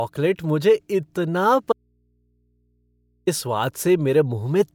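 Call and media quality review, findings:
Audio dropout to a faint residue, 1.73 to 3.27 s, just after "मुझे इतना". Speech cuts abruptly for 1.55 s. Gap holds only mains hum, roughly 45 dB down. Likely source lost upstream, downstream input left live and open.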